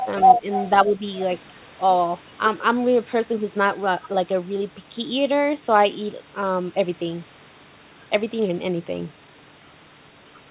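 A faint, delayed copy of the talker sits under the audio from 0.00 to 0.07 s and again from 0.52 to 0.70 s, trailing by 281 ms at roughly 15 dB below the main signal. This is likely an echo leak, where the far end's loudspeaker sound reached its microphone and its echo canceller let part of it back. Between those, from 0.39 to 0.44 s, the speech briefly dips by around 10 dB, and from 0.85 to 1.02 s it sags again by a similar amount. Both dips are likely speech suppressed in double talk: with both sides talking at once, the canceller could not tell the local talker from echo and turned both down. Throughout, the audio carries the narrowband, 4 kHz-limited sound of the call path, which fits G.711 telephony.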